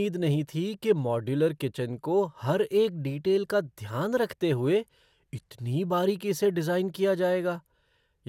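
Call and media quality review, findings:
Generation loss, whole clip: swirly, hollow, smeared speech with blurred attacks and nothing above 17.3 kHz. Likely repeated lossy re-encoding, consistent with about four passes through MP2 at 128 kbit/s, each requantising on a shifted frame grid and compounding the damage.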